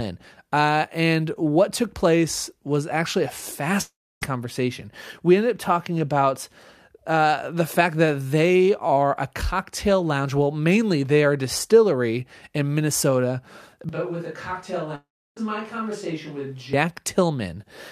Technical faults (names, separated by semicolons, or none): long network dropout; switch to a distant microphone